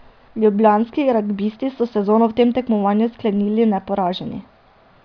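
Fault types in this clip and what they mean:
No fault types appear in this clip.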